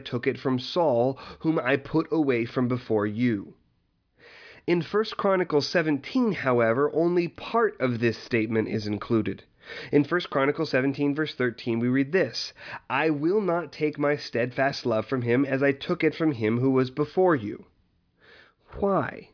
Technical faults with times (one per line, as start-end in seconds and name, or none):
none